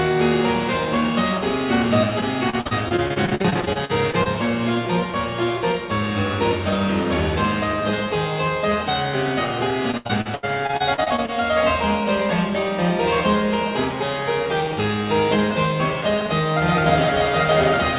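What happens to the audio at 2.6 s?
At 2.6 s the sound turns choppy and robotic, with pieces missing. This is repeated packet loss from 2.21 to 4.27 s: about 20 short gaps, each up to 47 ms, patched by stretching the last sound.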